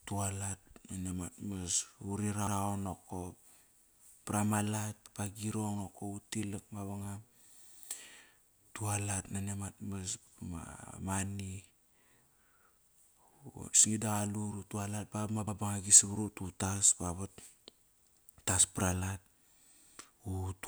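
A short stutter recurs at 2.47, 5.07 (after "pra malat"), 7.67 (after "utilak mavangam"), 10.27, 12.87, 15.47 and 18.07 s (before "utas para lat"). These are overlapping chunks: each 2.5 s block begins 100 ms before the previous one ended, so that 100 ms plays twice at every join.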